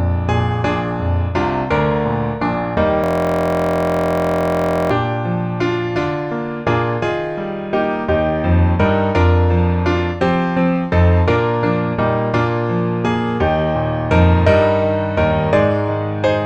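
From 3.04 s to 4.91 s the audio locks into a system hang loop. The machine or driver stalled while the hardware kept replaying one 23.22 ms buffer, which fits a 1024-sample buffer. It repeats about 80 times. The result is a steady buzz at 43.1 Hz.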